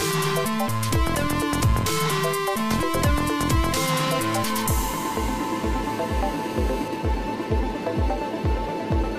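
From 5.84 to 6.88 s, GSM phone buzz: a calling phone's 217 Hz radio pulses get rectified into a hard rasp about 17 dB below the sound, drawing evenly stacked harmonic lines on a spectrogram.

From 6.93 to 7.83 s come GSM signalling bursts as the caller falls silent: even ticks with a longer buzz twice a second, roughly 20 dB down, seen as grouped vertical spikes in the waveform.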